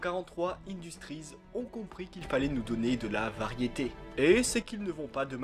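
At 2.21 s the level steps up by about 9 dB in a single sample, with the background noise rising together with the sound, then drops back at 4.62 s. This sudden gain jump is likely a digital gain setting applied without any ramp.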